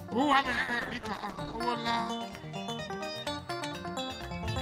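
The audio has a call bitrate drop from 0.33 s to 1.65 s. It turns coarse and watery, and the top end dulls for about 1.25 s before clarity returns. This fits a collapse in the call's bandwidth estimate that forced the encoder from roughly 128 kbps down to about 13 kbps, where it quantises crudely and discards high frequencies. On a spectrogram, the upper band goes empty across that span and the remaining energy looks smeared and blocky. The waveform barely changes.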